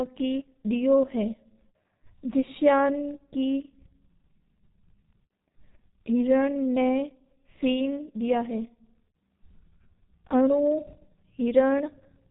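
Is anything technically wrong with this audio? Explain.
Yes. The whole speech clip sounds like the G.723.1 codec, heavily: nothing above 3.8 kHz, slow 30 ms frame updates consistent with roughly 6 kbit/s, so it's muffled, hoarse, with smeared consonants.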